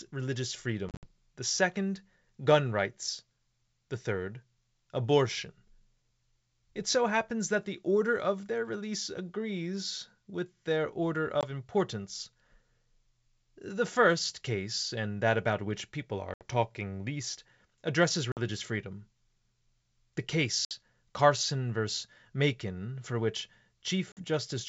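Packet loss on an ADPCM call drops stretches of the G.722 stream, which are filled with silence, and the receiving decoder's adaptive predictor and step size drift out of step with the sender's. The result is hard-edged holes at 0.89–1.07 s (110 ms lost in several gaps across 140 ms, the longest 60 ms), 11.41–11.45 s, 16.34–16.45 s, 18.32–18.39 s, 20.65–20.72 s and 24.12–24.22 s. After each hole the speech resumes through a decoder that must re-converge before it tracks properly again.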